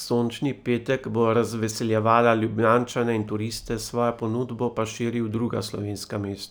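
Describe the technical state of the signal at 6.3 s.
At 6.3 s the speech carries imaging from linear upsampling, present throughout the clip. The rate appears to have been raised, consistent with a 24 kHz source converted to 44.1 kHz, by straight-line interpolation between samples, which filters poorly. The top of the original band sounds dulled, and a mirrored copy of the spectrum sits between 12 kHz and 24 kHz, roughly 35 dB down, audible as a faint metallic shimmer on sibilants.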